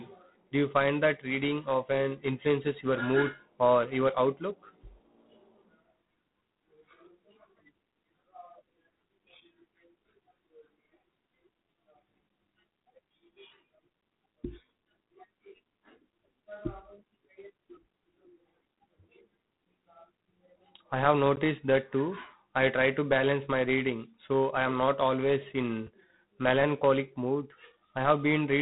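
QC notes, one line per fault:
Throughout: G.726 ADPCM. The speech carries a harsh, rasping hiss that rises and falls with its level, and nothing above 3.9 kHz comes through. The codec sends only the difference between each sample and an adaptive prediction, using very few bits per sample. That coarse quantisation leaves a noise floor tied to the signal, which is why the grit swells on louder syllables. The damage is plainly audible, and its coarseness fits the 24 kbit/s mode.
21.36 s: block of digital silence. About 13 ms of samples drop to silence, and the sound cuts out and back in with no fade, so it comes across as a short tick rather than a hole. The cause is a stretch of output buffer that was never filled in time, or a calculation that produced invalid values which were then zeroed.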